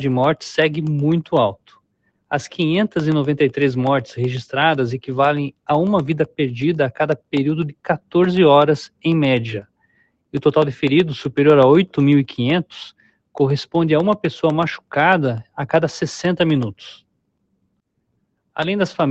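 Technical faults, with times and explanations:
Throughout: noise suppressor applied to music or sounds. A speech-oriented suppressor treats sustained tones, ambience and reverb as noise, so the level keeps swinging by around 5 dB. Onsets survive while held parts and tails sag, giving a pumping, fluttering, thinned texture rather than isolated gaps.
0.12 to 19.11 s: periodic USB or driver dropouts. Every 0.125 s, eight times a second, a brief slice of audio is replaced by silence when the bus or driver stalls. The result is a steady train of ticks. Their strict clock-like spacing and their presence only where sound is playing distinguish them from the suppressor's slower, irregular level dips.
1.55–2.31, 7.73–8.14, 8.88–9.04, 9.62–10.34, 12.93–13.36, 16.97–17.81 and 17.97–18.5 s: sound cut by the noise suppressor. In each stretch the suppressor judged the sound to be noise and dropped it by about 21 to 22 dB. 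Sustained and decaying material sinks or has its tail chopped, while sharp attacks largely get through. These are deeper, localized holes, unlike the constant milder pumping.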